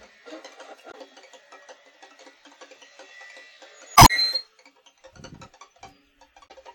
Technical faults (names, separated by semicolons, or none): damaged data in a compressed stream